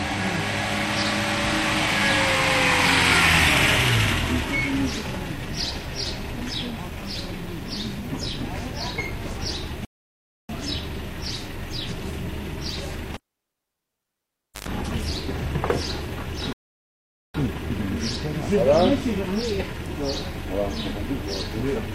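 At 9.85 s a rebuffering stall starts: the player runs out of downloaded audio, so the sound drops to silence for 0.64 s and then resumes exactly where it stopped. From 13.14 s to 14.68 s a cable is pulled and plugged in again: a pop, about 1.49 s of near silence, a 0.11 s burst of 50 Hz mains buzz, then a second pop. A second rebuffering stall at 16.53 s adds 0.82 s of silence before playback resumes.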